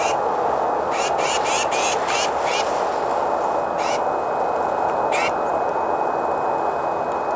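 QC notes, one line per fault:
No faults heard anywhere in the clip.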